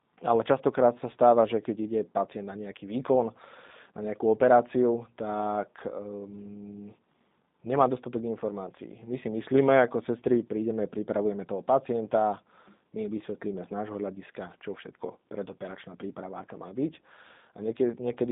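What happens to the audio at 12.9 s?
At 12.9 s the speech sounds thin, slightly rough and synthetic, with nothing above 3.8 kHz. This is G.729 codec damage, present throughout. The codec rebuilds each 10 ms frame from a vocal-tract filter, pitch predictor and a few pulses, consistent with 8 kbit/s coding.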